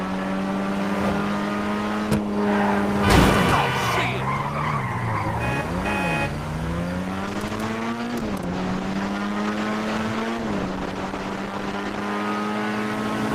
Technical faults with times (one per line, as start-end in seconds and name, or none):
7.24-12.09 call bitrate drop